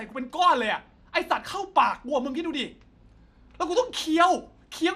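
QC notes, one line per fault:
throughout: MP2 compression, likely at about 80 kbps; too few bits shut off upper sub-bands and coarsely quantise the rest, leaving the speech dull, gurgling and granular.
2.53 s: DAB burbling, a single corrupted frame where bit errors slipped past correction, briefly putting short blips of noise into individual sub-bands, producing a few watery blips.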